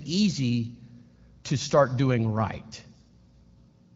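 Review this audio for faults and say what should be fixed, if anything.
No faults turn up in this audio, so nothing needs to be fixed.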